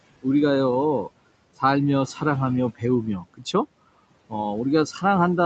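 Noise suppressor artifacts run the whole way through. The suppressor pulls the steady room noise down by about 21 dB, frame by frame, so the background dips in the gaps and comes back up under the speech.

Speech cut by the noise suppressor shows up from 3.2 to 3.54 s, where roughly 150 ms of quiet speech gets mistaken for noise and dropped by up to about 18 dB. It happens again from 4.93 to 5.03 s, with a dip of about 11 dB. Both bits sound swallowed.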